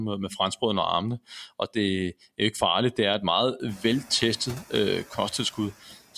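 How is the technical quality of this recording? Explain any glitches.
The recording has two audible faults, both from noise suppression: processing artefacts that run the whole length, and one brief moment near the end where part of the speech itself gets turned down.

Noise suppressor artifacts, throughout. The suppressor estimates which frequency bands hold steady background noise and lowers them frame by frame, here by about 15 dB. The room noise, which rises sharply by about 24 dB at around three and a half seconds and then sits about 19 dB under the speech, pumps as a result. It sinks in the pauses and returns beneath the speech.

Speech cut by the noise suppressor, 5.83 to 5.95 s. For roughly a tenth of a second the suppressor mistook quiet speech energy for noise and attenuated it along with the background, dropping it by as much as about 9 dB. Whatever was being said in that span, likely a soft consonant or trailing sound, comes through faint and swallowed rather than cleanly articulated, a small dip just before the clip ends.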